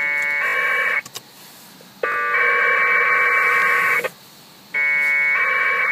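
Three brief stutters break into the audio, each a tiny fragment played back-to-back with a hard join: at 0.48 to 0.54 s it repeats three extra times, at 2.12 to 2.16 s twice, and at 3.6 s once. This is a repeated buffer. Fresh audio arrived late, so the device replayed its last block, which fits a 20 ms buffer, and skipped ahead by roughly 70, 40 and 20 ms of sound.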